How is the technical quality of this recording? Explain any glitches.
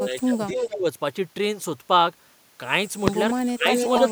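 The recording is marred by two recurring echo-control glitches, one cutting the talker down and one letting a delayed copy back in.

Speech suppressed in double talk, from 0.0 to 0.86 s and again at 3.47 to 3.7 s: the level dips by roughly 15 dB, likely because an echo canceller confused overlapping talk with echo. It sounds like a drop-out, not an added copy.

Echo leak, at 0.56 to 0.74 s and from 3.72 s to the end: a repeat arrives about 0.3 s late, only a few dB below the speech, likely residue a loudspeaker-side echo canceller missed. Unlike suppression, it adds sound.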